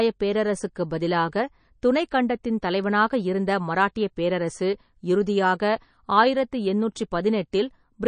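Speech with a hard treble ceiling at 9.4 kHz and plainly audible watery, swirling artefacts throughout. That points to MP3 compression, likely at a bitrate around 32 kbps.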